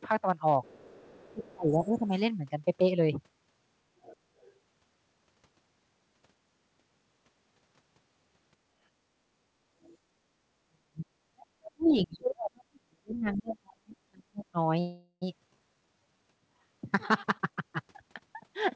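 From 0.64 to 2.19 s a faint second voice, about 30 dB below the talker, sits under the speech. This is the other side's voice leaking through, likely loudspeaker echo the canceller left in. It is a separate voice, not a dip in the main one. Inside that stretch, from 1.09 to 2.13 s, the talker's own voice sinks by roughly 25 dB for about a second. That is speech suppressed in double talk, likely the canceller turning everything down while both sides spoke. Unlike gating, the speech itself is cut.

The leak returns from 4.04 to 4.53 s at about -25 dB. Within it, from 4.22 to 4.32 s, the background is gated by the echo canceller. The room sound drops about 12 dB for roughly 70 ms and then recovers. Only the ambience dips, not a voice. A second gate from 9.63 to 9.76 s pulls the background down about 14 dB for around 150 ms. A brief, faint leak follows from 9.83 to 9.97 s at about -35 dB.

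The heavier double-talk suppression runs from 10.69 to 14.59 s. About three seconds of the talker's voice are dipped by up to roughly 40 dB. A scrap of leaked far-end voice surfaces from 13.15 to 13.38 s at about -25 dB.

From 14.80 to 15.24 s there is a call audio freeze, likely packets held up and an empty jitter buffer. The last sound is stretched as a fading buzz for 416 ms, including about 50 ms of silence. Playback then resumes where it stopped, so nothing is lost. The skip ahead at 15.54 to 15.58 s is the opposite: roughly 150 ms of audio vanishes and the two sides are joined almost seamlessly, with only about 20 ms filled.

From 15.74 to 16.24 s a jitter buffer slow-down plays the sound at 85% speed with unchanged pitch. It adds 81 ms through repeated pitch periods, which gives drawn-out sounds. The jitter buffer speed-up from 17.12 s to the end runs at 116% speed. It trims roughly 300 ms, so the sound is hurried but its pitch is unchanged.

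Throughout, the call path's bandwidth ends at 8 kHz, which fits G.722.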